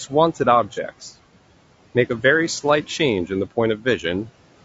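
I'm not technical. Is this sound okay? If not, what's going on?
No. There are four separate problems in this speech recording.

The background hiss rises and falls with the talking. It sinks into near silence in the pauses and comes back under the voice. These are noise suppressor artifacts. A cleanup stage keeps guessing which parts of the sound are steady noise and turns those down moment by moment. Its cuts are fairly deep, so the leftover room noise keeps pumping in and out instead of staying steady.

The voice is also rough and grainy all the way through, with a fizzy, artificial quality in the highest sounds. That points most likely to low-delay AAC compression, the kind video-call apps use to squeeze audio small enough to send instantly. It works on very short slices of sound and doesn't get much data to work with, so it can't reproduce the voice's natural tone cleanly.

From 0.74 to 0.78 s there is a brief smeared, noisy blip where the voice loses its shape. 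This is AAC frame loss with concealment. About 30 ms of audio never arrived, and the decoder patched the gap by inventing sound based on what came just before. The guess is close but not exact, so the patch sounds blurred rather than silent.

At 2.09 s there's a tiny tick, a sharp click where the sound drops out completely for a split second. That is a block of digital silence. Around 10 ms of audio was replaced by pure nothing, likely because the playback software didn't deliver the next chunk of sound in time. Because the cut is instant, with no fade in or out, and so short, it is heard as a tick rather than a gap.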